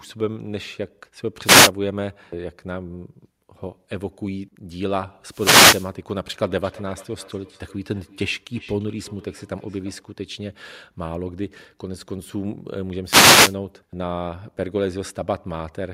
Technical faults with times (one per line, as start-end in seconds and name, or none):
1.44-1.71 wireless microphone noise hit
5.28-5.92 wireless microphone noise hit
6.40-10.05 feedback echo between two devices
13.04-13.56 wireless microphone noise hit